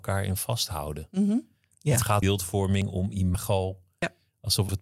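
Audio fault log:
2.22 s, 3.34 s and 4.69 s: compressed frames skipped. At each of these points the speech jumps forward by roughly a fifth of a second, and a stretch of sound just isn't there. The gap fits a run of about seven 32 ms frames that the decoder never played, either because they were missing or because it rejected them as damaged.
2.82 s and 4.02 s: dropped buffer (overrun). Here there's an abrupt jump in the speech and no silence. The first cut loses a few tens of milliseconds and the second closer to a tenth of a second. The likely cause is the program falling behind, so the hardware overwrote samples it hadn't read yet. The audio on either side of the lost piece gets butted together.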